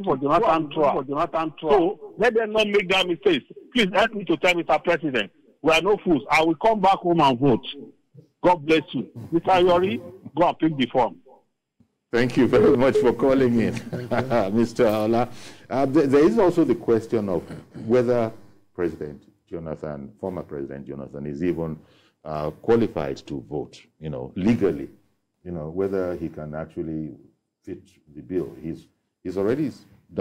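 From the very start until 2.58 s, a doubled audio track is already under way: a second full-band copy of the sound runs about a second behind the original and only about 5 dB quieter. It was likely captured again through a slower path, or an edit left two copies out of step. Unlike an echo or reverb, the copy has no decay or room colouring, and it cuts off abruptly at 2.58 s.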